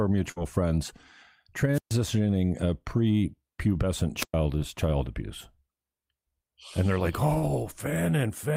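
From 0.31 to 0.40 s, a burst of packet loss: the receiver extends the last sound for about 48 ms, fading it, then skips ahead past about 40 ms of missing speech. At 1.73 to 1.91 s, and again at 4.18 to 4.34 s just after "a prepubescent", a wireless microphone squelch dropout occurs. The radio signal fades until squelch mutes the output, leaving a hiss-edged hole of about 130 ms and then about 113 ms. Short concealed packet loss follows at 4.59 to 4.63 s, just before "child abuse", and at 7.39 to 7.44 s, after "they're like". Late packets are patched with synthesized continuation, heard as brief smears over roughly 20 and 40 ms of lost audio.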